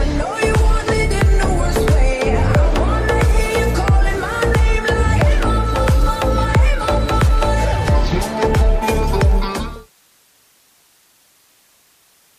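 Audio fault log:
Nothing here to flag; the only change in level is a smooth fade-out that begins around 9.5 s and finishes by 9.92 s, eased off gently with no click or hard edge.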